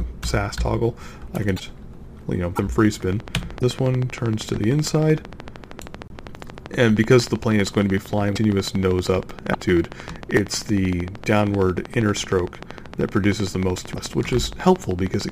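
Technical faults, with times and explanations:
1.56–1.60, 2.55–2.59, 3.59–3.62, 6.08–6.12, 8.35–8.38, 9.52–9.55 and 13.94–13.97 s: broken MP3 bit reservoir, likely; frames fitting 26 ms were lost, so following frames decode borrowed bytes wrongly and the sound jumps ahead, unlike a plain dropout.
3.13–15.3 s: train of clicks, about 200 at a regular 13 per second, peaking around 10 dB above the sound, likely from interference or a faulty connection or supply.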